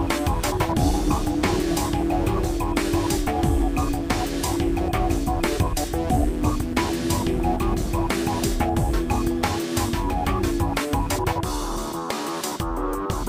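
The sound carries mains hum from 0.0 to 9.30 s, a steady 60 Hz tone roughly 15 dB below the signal, pointing to a ground loop or nearby transformer. On a spectrogram it shows as an unbroken horizontal line at 60 Hz that ends abruptly at 9.30 s.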